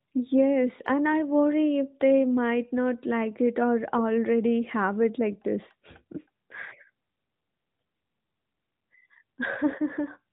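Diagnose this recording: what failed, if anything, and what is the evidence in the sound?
Nothing in the recording has failed. The speech is band-limited to below 4 kHz with a faintly synthetic edge, as expected from the AMR narrowband mobile codec at its higher rates.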